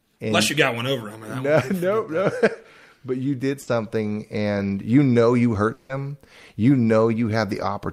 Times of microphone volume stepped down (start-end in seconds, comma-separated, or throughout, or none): none